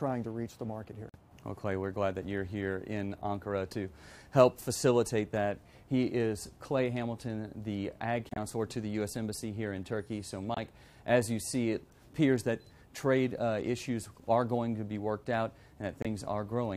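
Bit errors in the compressed stream made the decoder reject frames, and the player substituted silence. These corrupt frame muted dropouts fall at 1.09 s, 8.29 s, 10.54 s and 16.02 s. Each is an abrupt gap of 66 ms, 84 ms, 36 ms and 35 ms, with timing kept afterwards.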